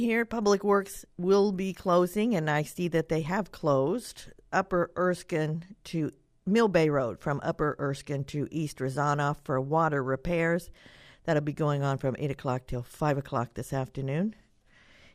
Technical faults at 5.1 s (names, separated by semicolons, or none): none